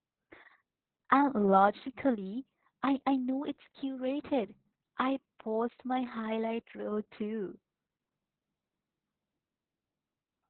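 Across the whole clip the speech carries Opus voice compression at very low bitrate. Nothing survives above 4.3 kHz, so it sounds muffled, and the coarsely coded SILK excitation adds a hoarse, slightly robotic buzz. That grit distinguishes it from a simple low-pass filter, and the damage points to roughly 6 kbps.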